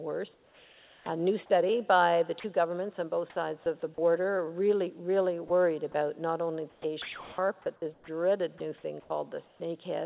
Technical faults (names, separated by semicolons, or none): comfort noise in place of the background; onset clipped by the voice detector; sound dropped by the voice detector; sound chopped by the voice detector